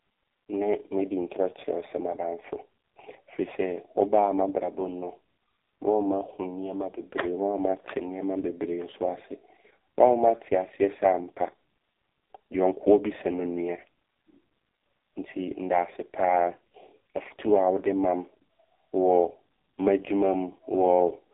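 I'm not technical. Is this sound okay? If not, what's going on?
No. Throughout, the speech went through an AMR narrowband mobile codec at a very low-quality setting, leaving it muffled, buzzy and robotic, like a bad phone line.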